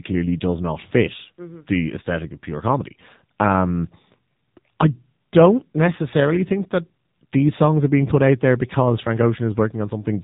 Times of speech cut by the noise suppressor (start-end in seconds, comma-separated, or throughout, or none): none